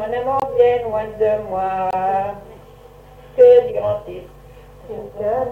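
Damaged compressed data was rejected by the decoder and replaced with silence, a corrupt frame muted, at 0.40 s and again at 1.91 s. Each gap opens abruptly, lasting about 42 ms and 36 ms respectively, which fits a single lost frame, and timing stays intact afterwards.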